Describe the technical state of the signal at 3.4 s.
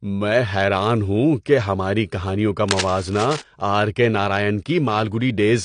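Cable scratch noise runs from 2.68 to 3.42 s, starting just after "کہ ہماری کہانیوں کا", so 3.4 s sits at its tail. It sounds like dense, uneven scratching about 10 dB below the speech, likely from a worn cable or connector being moved and its contact resistance jumping rapidly.

Low-bitrate audio saved at a high bitrate also applies here, as it does across the whole clip. Nothing sounds above 10.2 kHz, and the artefacts of the earlier encoding remain. That fits speech first squeezed through a low-bitrate codec near 32 kbit/s, then re-encoded as a large MP3 that cannot restore what was lost.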